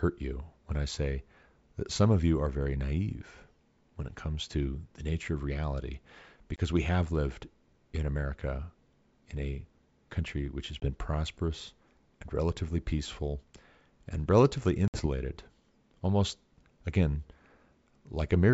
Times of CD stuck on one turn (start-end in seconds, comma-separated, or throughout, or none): none